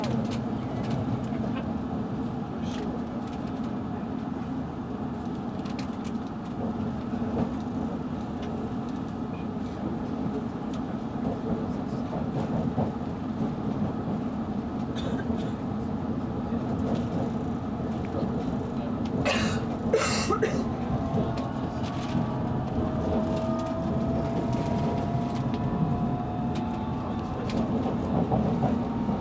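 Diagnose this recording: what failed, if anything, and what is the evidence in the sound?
Nothing failed; no faults heard.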